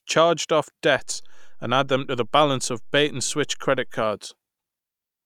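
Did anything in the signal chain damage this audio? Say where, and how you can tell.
Yes, a DC step from 0.99 s to 4.02 s, at the converter or analogue input: the zero line jumps, giving low thumps at each edge while the speech continues unchanged.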